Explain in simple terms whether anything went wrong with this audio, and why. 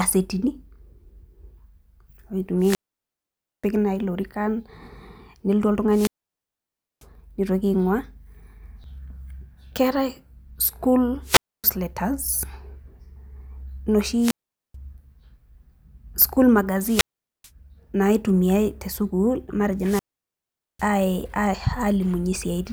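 The speech cuts out six times because of wireless microphone squelch dropout, at 2.58–3.67 s, 5.89–7.06 s, 11.23–11.64 s, 14.19–14.75 s, 16.81–17.50 s and 19.78–20.90 s. Each time, the radio link from the microphone weakened, and the receiver muted its output rather than pass static. The silent gaps last from about 0.27 s to 0.94 s, long enough to lose parts of the speech before the signal recovers.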